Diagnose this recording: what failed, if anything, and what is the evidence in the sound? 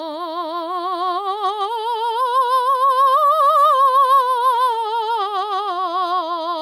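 Nothing in the signal chain failed: the music plays as an unbroken signal throughout, with no audible defect at any stage.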